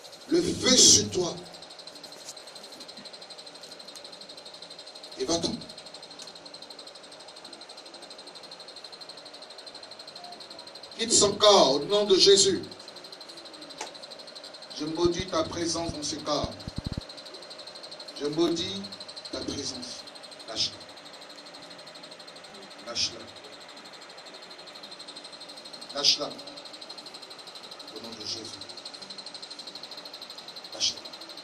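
At 10.44 to 10.46 s, then 14.46, 18.48, 22.5 and 26.52 s, overlapping chunks replay 20 ms at each 4.0 s join, a stutter regular enough to set a clock by. From 15.05 to 16.99 s a train of clicks ticks irregularly, about four per second and roughly ten in all, around 10 dB above the sound, likely from external interference. At 29.95 s compressed frames are skipped: about four 26.1 ms frames, roughly 100 ms, vanish, and the audio jumps ahead.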